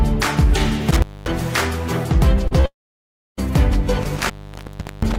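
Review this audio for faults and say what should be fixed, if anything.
At 0.91–1.28 s and again from 4.03 s to the end, there's intermittent contact: a loose plug or cable opens for about 0.24 s and then 0.73 s, cutting the sound with crackly edges. Reseat or replace that connector.

At 2.47–2.53 s and 2.61–2.66 s, short concealed packet loss leaves brief smears where the receiver patched about 30 ms gaps by extending the previous sound. A steadier network path or a larger jitter buffer would help.

From 2.66 to 3.39 s, the patched sound fades into roughly 0.65 s of silence before the audio resumes with a chunk missing, likely a long network dropout. Fixing the connection's stability should stop it recurring.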